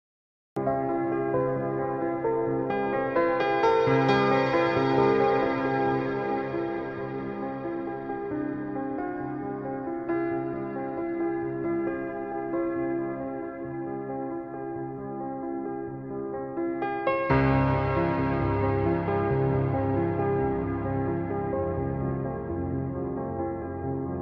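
Right at the top there's a cut-off start: the first 0.57 s or so is digital silence, and then the audio appears abruptly at about 0.57 s, already in the middle of a sound. What happened is that capture or the stream began late, so whatever was playing got picked up partway through. You hear no natural attack or fade-in. It just switches on, as if someone unmuted it partway through.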